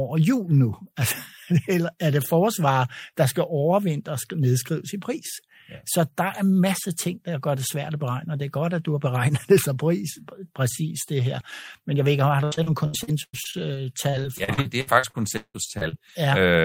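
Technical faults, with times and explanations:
12.28–16.11 s, repeated packet loss (robotic sound): after "jeg ved ikke", 19 lost packets, longest 175 ms, patched by extending prior sound, leaving choppy speech with pieces missing.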